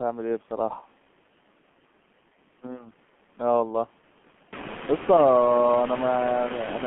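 From start to finish the speech runs through the G.723.1 codec, squeezed into a 150 Hz to 3.4 kHz line band. The damage is heavy, with muffled, hoarse vowels and smeared consonants that point to a very low rate around 6 kbit/s. The room noise swells noticeably around four and a half seconds.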